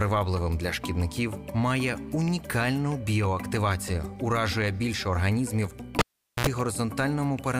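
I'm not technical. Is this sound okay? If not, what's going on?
No. At 5.99 s a cable was pulled and plugged in. A pop, then 0.43 s of near silence, a brief 60 Hz buzz, and another pop by 6.47 s.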